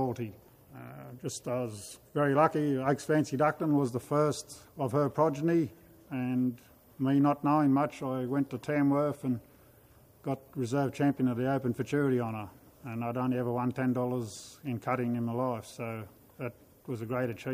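Nothing here stands out as a technical fault; the sound carries on without a single dropout, glitch or break that a listener would catch.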